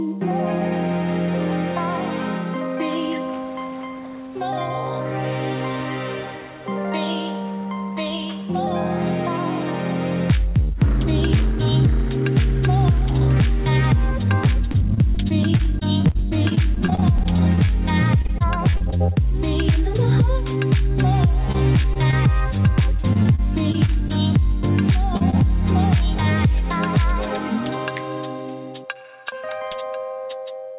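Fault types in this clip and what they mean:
Repeated packet loss (robotic sound): gaps up to 42 ms recur between 14.4 and 24.1 s, each filled by stretching the last sound, giving choppy stretches with pieces missing.
Short concealed packet loss: near 25.2 to 25.4 s, two isolated holes of 20 and 40 ms are bridged by continued sound, heard as a brief smear.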